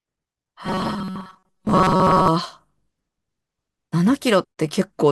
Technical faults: robotic sound from repeated short buffers

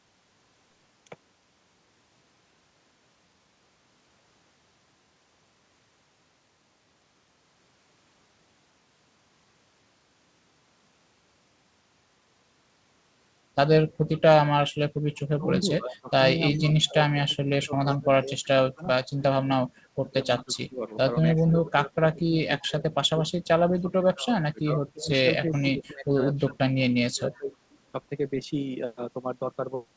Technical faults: echo leak; speech suppressed in double talk

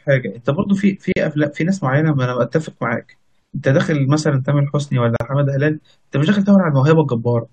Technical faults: gap at a join of encoded pieces

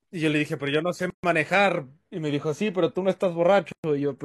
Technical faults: gap at a join of encoded pieces

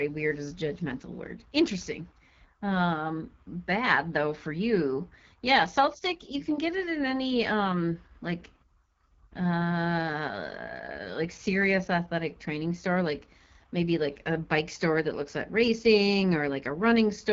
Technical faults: AMR wideband (HD Voice) codec

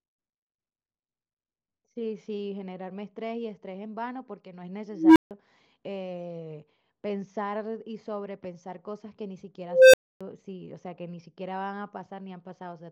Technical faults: unstable filter

